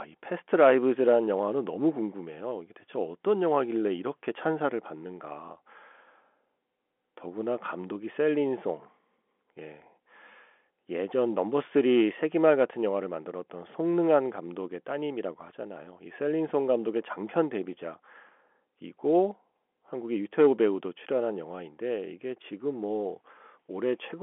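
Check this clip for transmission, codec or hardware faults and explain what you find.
Nothing stood out on listening to this speech beyond the narrow band of an ordinary G.711 telephone line, with the sound topping out around 3.8 kHz.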